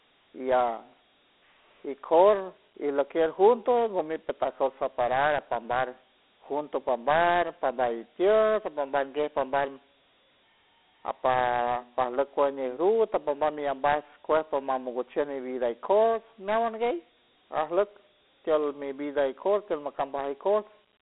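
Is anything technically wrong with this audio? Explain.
Yes, two problems. The whole clip carries Dialogic VOX ADPCM damage: the speech sits in a phone-style band of roughly 250 Hz to 3.5 kHz with nothing above 3.9 kHz, and the coarse 4-bit step coding leaves gritty hiss trailing the voice, which fits a 32 kbps VOX file.

Then from 19.33 s to the end, de-emphasis is applied wrongly: a treble-cut meant to undo pre-emphasis lands on audio that never had it or was applied a second time, tilting the response down to about 13 dB lower at 10 kHz than at 1 kHz, so that last stretch turns duller and more muffled.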